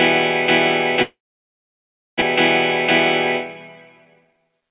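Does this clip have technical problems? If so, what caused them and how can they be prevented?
Yes. From 1.02 to 2.24 s the audio fades into a brief buzz, then near silence. It resumes with about 0.76 s missing, a long network dropout most likely caused by lost or stalled packets. Prevent it with a more stable network link or redundancy such as forward error correction.

From 4.05 to 4.70 s the audio runs hurried at about 153% speed with unchanged pitch. This jitter buffer speed-up came after the dropout, when the buffer trimmed short pitch-period slices to shed roughly 0.4 s of built-up delay. Reduce it by keeping network delay steady so late packets don't arrive in bursts.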